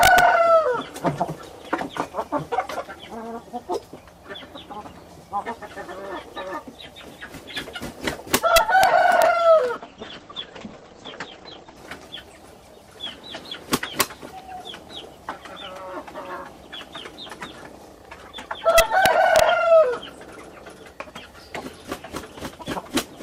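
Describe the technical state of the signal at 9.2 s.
At 9.22 s there is a single integer overflow: a peak reaching the top of the integer range, with about 0 dB of overdrive, wraps to the opposite sign instead of being held. Clipping would flatten the peak, but this flips it across the full range, giving a much sharper, violent crack.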